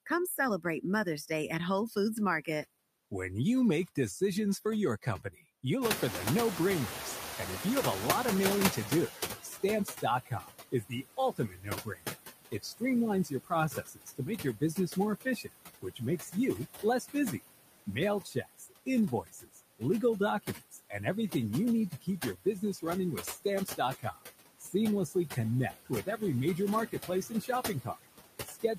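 Throughout the recording the noise suppressor is pulling down every band it judges to be steady noise, by about 18 dB, and re-deciding frame by frame. That constant gating leaves its mark on the background: it dips away in the pauses and swells back under the talking.

The suppressor also misreads parts of the speech as noise and attenuates them along with the background. This speech cut by the noise suppressor happens at 0.06–1.3 s, 1.89–2.48 s and 3.88–5.64 s, with drops of about 12 to 14 dB over brief fragments of a tenth to a few tenths of a second, so the affected bits of speech sound swallowed.

Around 6 s the room noise jumps by about 20 dB, settling roughly 7 dB below the speech. The suppressor's noise estimate lags behind this change, so the noise suppressor is catching up from 5.81 to 9.49 s. For those 3.7 s the louder background comes through with less reduction than before, then gradually sinks as the estimate adapts, ending at about 13 dB of cut.

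The speech cuts grow worse after this. From 8.76 to 19.82 s, about 3 s of speech in total is pushed down, by up to about 20 dB. At 20.43–20.94 s the drop reaches about 17 dB, and from 21.9 s to the end it reaches about 21 dB. The affected speech there sounds swallowed or faint.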